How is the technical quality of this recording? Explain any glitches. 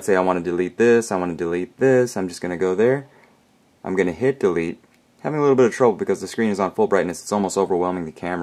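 No glitches or technical faults can be heard anywhere in the recording, and the signal stays stable and intact throughout.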